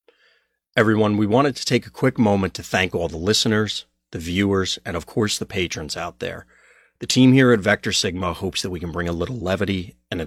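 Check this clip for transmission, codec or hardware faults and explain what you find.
No transmission, codec or hardware faults can be heard in this speech recording; the signal stays continuous and intact throughout.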